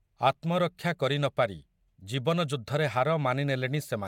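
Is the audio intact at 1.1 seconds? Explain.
Yes, the audio is intact at 1.1 seconds, with no audible fault at that point.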